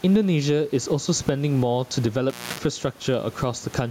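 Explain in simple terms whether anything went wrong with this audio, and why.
Throughout the clip, loud and soft parts sit closer in level than they should, and the sound is squashed. That's gain pumping, likely from the level set too high and a fast limiter pulling it down.

Between 2.30 and 2.60 s, the sound drops out for about a quarter of a second, with crackles at each edge. That's an intermittent contact, a loose cable or plug briefly breaking the connection.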